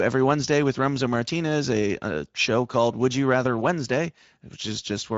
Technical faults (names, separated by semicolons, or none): Speex codec